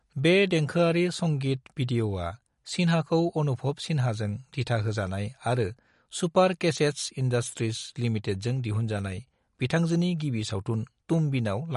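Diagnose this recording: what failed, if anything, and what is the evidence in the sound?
Throughout, the speech sounds watery and swirly with nothing above 11.2 kHz. This is likely MP3 compression at the codec stage, which fits a bitrate near 48 kbps.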